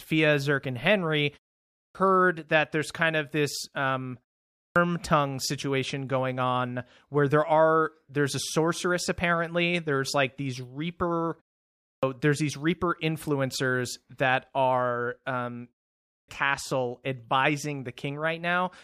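The output device drops into a sleep state during short silences and needs time to wake and lock again, producing a clipped start after a pause at 1.67, 4.48, 11.76 and 16.0 s. Each follows a gap of only 0.3 to 0.4 s, and about 0.27 to 0.28 s of the returning speech is swallowed each time, so words burst in abruptly without their opening sounds. The muted pauses themselves carry no speech loss.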